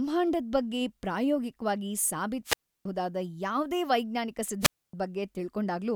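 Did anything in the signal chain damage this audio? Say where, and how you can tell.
Yes: wireless microphone squelch dropout in the analogue radio link, after "ಬಗ್ಗೆ ಪ್ರಾಯೋಗಿಕ್ವಾಗಿ" at 2.44–2.85 s and after "ಯಾವ್ದೇ ವೈಜ್ಞಾನಿಕ" at 4.60–4.93 s. The fading signal triggers muting of 320 ms and 270 ms, seen as brief hiss, then flat waveform and blank spectrogram columns.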